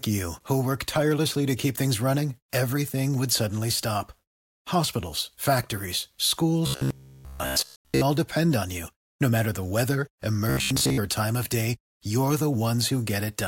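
From 6.67 to 8.01 s, just before "all depend on you", and again from 10.50 to 10.99 s, between "matter the weather" and "or time of day", the speech becomes robotic sound, likely from repeated short buffers: a 15 ms chunk loops, forcing a rigid 66.7 Hz metallic buzz, throughout the first stretch and across most of the second.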